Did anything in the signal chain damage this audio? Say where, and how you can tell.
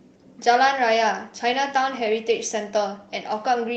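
No, nothing along the chain damaged it; the speech came through a normal call path with the codec band-limiting it around 8 kHz, and at a rate that fits roughly 32 kbps Opus.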